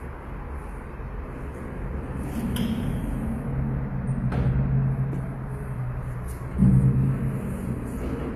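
Sounds throughout the clip have nothing above about 14.9 kHz, likely low-bitrate audio saved at a high bitrate. The damage fits a 24 kbit/s HE-AAC source re-encoded as 192 kbit/s MP3. Unlike a simple low-pass filter, the earlier codec's artefacts remain.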